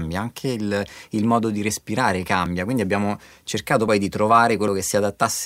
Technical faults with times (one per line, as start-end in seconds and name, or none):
2.46 dropped buffer (overrun)
3.88 dropped buffer (overrun)
4.68 dropped buffer (overrun)